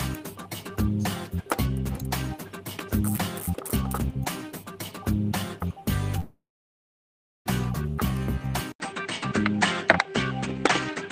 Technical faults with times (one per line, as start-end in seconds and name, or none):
6.19-7.48 long network dropout
8.72-11.11 input switched to a poorer device